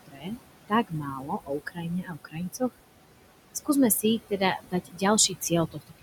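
Overdone noise removal runs through the whole clip. The suppressor was set so aggressively that every band sitting near its noise estimate gets pushed almost to nothing. The room noise, only about 11 dB under the speech, collapses into near silence sprinkled with twinkling specks.

Noise suppressor artifacts are also present from start to finish. Working frame by frame, the suppressor pulls the steady background down by about 21 dB between words and lets it rise again beneath them. The leftover noise pumps in step with the speech.

Speech cut by the noise suppressor hits the speech itself in five places. From 0.06 to 0.39 s, roughly a third of a second is lowered by up to about 21 dB. Between 0.88 and 2.62 s, about a second in total drops by up to about 20 dB. From 4.58 to 5.03 s, around a third of a second dips by up to about 17 dB. From 5.28 to 5.52 s, a brief stretch loses up to about 10 dB. 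From 5.72 to 6.02 s, a short stretch sinks by up to about 20 dB. In each of these, the suppressor mistook part of the speech for noise, so it comes across as swallowed or faint.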